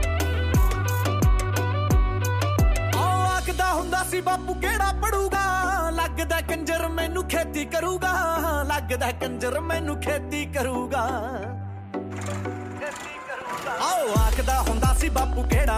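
From 13.41 to 15.45 s there's a train of clicks, about 15 uneven pops at roughly 6.4 per second, peaking about 5 dB above the sound, likely from electrical interference.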